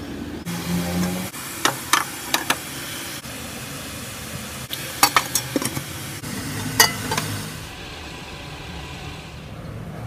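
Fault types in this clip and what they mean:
hard clipping: the signal overshoots the stage's ceiling by about 18 dB and then about 15 dB, flattening peaks into short bursts of gritty, harmonic-rich distortion at 5.03–5.36 s and 6.80–6.85 s.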